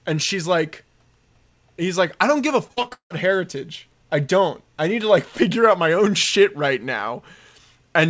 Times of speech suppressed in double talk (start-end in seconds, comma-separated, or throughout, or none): none